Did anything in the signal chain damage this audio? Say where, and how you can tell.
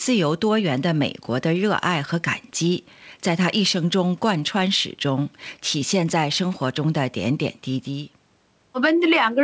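No, nothing stood out on listening to this speech.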